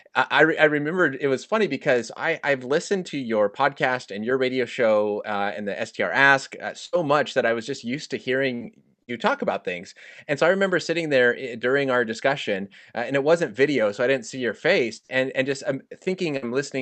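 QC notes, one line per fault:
6.85–9.14 s, repeated packet loss (robotic sound): three gaps, longest 73 ms, patched by extending prior sound, recurring closely so it turns choppy and robotic before "talk about things".
14.36–16.49 s, scattered short gaps: after "so I didn't see", about four isolated holes of up to roughly 70 ms, each bridged by continuation, leaving brief hiccups rather than sustained robotic chop.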